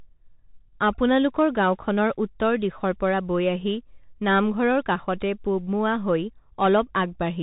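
From start to finish the speech carries the Bluetooth CVSD headset codec: a one-bit delta coder, consistent with a 64 kbps link, cutting everything above 4 kHz. Unlike simple band-limiting, it adds granular hiss, scratchy s sounds and gritty overload where loud high content outruns the adaptive step.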